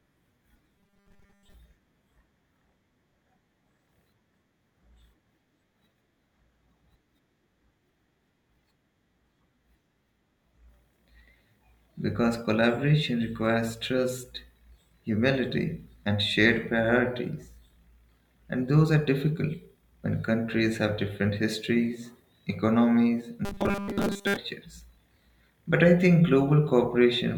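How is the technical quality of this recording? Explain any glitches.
Two short stretches turn robotic, at 0.78 to 1.54 s and at 23.45 to 24.37 s, the second right after "have different histories economies". Both are robotic sound from repeated short buffers. The speech becomes a rigid, metallic buzz at 200 Hz, which fits a 5 ms slice played over and over, most likely because new audio arrived too slowly. A spectrogram shows flat, evenly spaced harmonics at 200 Hz; the waveform shows repeating cycles.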